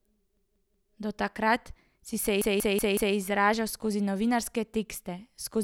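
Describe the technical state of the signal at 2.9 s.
At 2.9 s the signal is inside a repeated buffer fault running from 2.42 to 3.16 s. New audio arrived late, so the device replayed the last block four extra times, a length of about 186 ms that fits an 8192-sample buffer. It sounds like a stuttering, looping fragment of speech. The waveform shows identical blocks tiled end to end, and the spectrogram shows the same pattern copied across, with a hard vertical break at each join.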